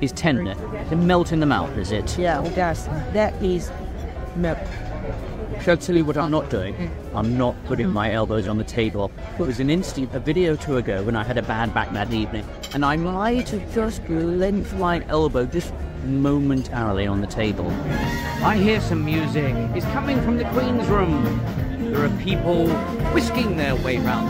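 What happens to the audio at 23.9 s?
Crude rate conversion runs from 22.45 to 23.95 s, ending right at that moment. Samples were dropped by nearest-sample picking with no filtering, which fits a 48 to 44.1 kHz conversion, leaving a gritty, inharmonic fizz about 30 dB below the sound.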